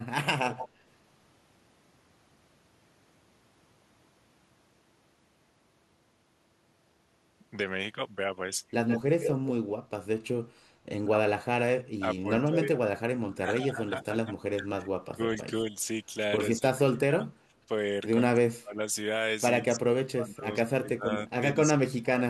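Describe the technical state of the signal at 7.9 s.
At 7.9 s the speech signal is intact, with no dropout, clipping, distortion or other audible fault at that point.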